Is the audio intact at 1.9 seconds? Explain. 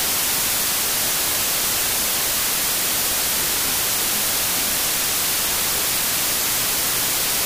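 No. A wrong sample width fault runs through the whole clip, including 1.9 s. Samples written as 32-bit integers are read as 16-bit, so each becomes two values, and only one keeps the real top bits. The speech sits buried in loud noise, at half speed and an octave low.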